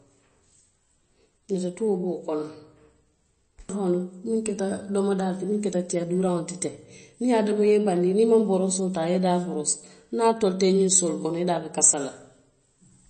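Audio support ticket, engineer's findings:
MP3 compression, throughout the clip. Plainly audible codec damage across the speech: watery, swirling texture, s sounds chirpy and metallic, consonant attacks smeared. Nothing above 8.3 kHz, a hard treble cut consistent with a starved encoder, which points to a low bitrate of around 32 kbps. Mechanism: too few bits per frame, so weak frequency lines are dropped and reappear frame to frame. Likely a low-bitrate MP3 stage in the chain.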